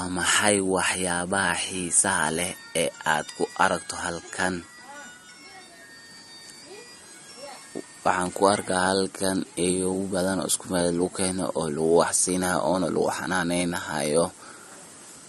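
Throughout the speech, the top end stops abruptly at 12 kHz and the sibilants sound swirly and chirpy, likely from MP3 compression at a rate near 40 kbps. A spectrogram would show a flat ceiling at 12 kHz and patchy, flickering gaps in the upper bands.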